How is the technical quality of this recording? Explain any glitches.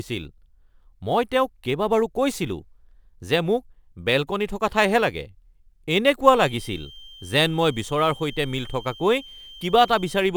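The recording has two technical faults: a constant sample clock jitter roughness and a feedback whistle in its final seconds.

Sample clock jitter runs throughout. The converter clock wanders by a few microseconds, so samples land slightly off time, leaving error some 30 dB below the speech. It sounds like hiss that swells on loud, bright syllables and vanishes in pauses. A spectrogram shows broadband haze tracking energetic, high-frequency speech.

A feedback whistle starts at 6.24 s and lasts to the end: a thin, steady 3.2 kHz tone about 25 dB below the speech, swelling and fading slowly in level. The likely cause is a loudspeaker-to-microphone loop sitting right at the edge of feedback, sustaining one frequency. A spectrogram shows a sharp horizontal line at 3.2 kHz.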